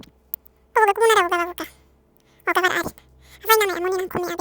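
From the first moment to the end, the speech plays with the audio read two samples at a time: pairs of samples are taken as a single frame, so the speech runs at double speed and sits a full 12 semitones, one octave, higher. Unlike a plain sample-rate mismatch, which only shifts speed and pitch, this fault also folds high frequencies back down, on top of the chipmunk effect.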